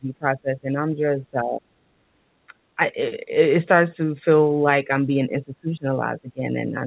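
Speech suppressed in double talk, from the start to 1.83 s, is likely the echo canceller mistaking the near talker for loudspeaker echo while both sides spoke, and pulling the speech down by as much as about 30 dB. Shorter dips follow at 2.48–2.53 s, 2.76–2.97 s, 3.20–3.31 s and 3.95–4.25 s, and a last stretch runs from 4.84 s to the end, dropping by up to about 15 dB.

Background gated by the echo canceller at 2.12–2.20 s: as the loudspeaker played, the canceller clamped the microphone, so the room sound dips by about 7 dB for roughly 70 ms before recovering.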